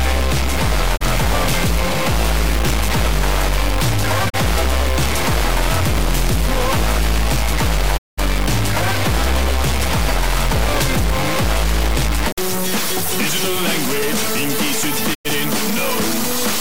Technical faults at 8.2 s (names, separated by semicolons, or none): stuck bit; digital broadcast dropout